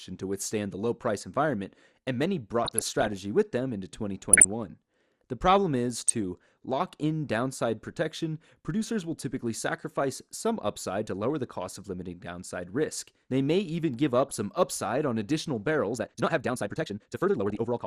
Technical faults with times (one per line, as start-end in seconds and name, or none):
0.00-17.87 MP2 compression
2.65-3.13 DAB burbling
4.32-4.46 DAB burbling
5.91-6.13 DAB burbling
14.28-14.36 DAB burbling
15.89-17.87 time-stretched section
17.50-17.66 DAB burbling